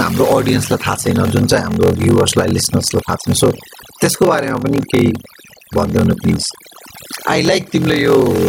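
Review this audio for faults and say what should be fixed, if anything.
Throughout the clip, the background falls to near silence dotted with twinkling specks. This is overdone noise removal: bands near the noise estimate are cut away along with quiet speech detail.

A steady 43.1 Hz buzz runs the full length, and everything plays at 0.861 times normal speed. This is a block size mismatch (padded): the reading stage takes 1024-sample blocks, the shortfall in each is zero-filled, and the ratio fits a writer delivering about 882 samples.

Gain pumping is also present throughout. The gain swings by around 15 dB under each loud syllable, squashing the dynamics. The likely cause is input gain set far too high, with a fast limiter pulling it back.

To prevent these, set the input gain so peaks stay clear of the limiter, apply noise reduction gently, and match the block sizes between the writing and reading stages.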